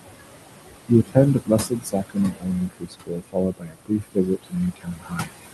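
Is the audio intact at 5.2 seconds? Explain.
No. From 4.76 to 5.31 s the speech sounds swallowed and faint, speech cut by the noise suppressor, which mistook it for noise and lowered it by up to about 20 dB. Throughout, the background noise also sinks between phrases: noise suppressor artifacts from frame-by-frame band cuts of about 20 dB.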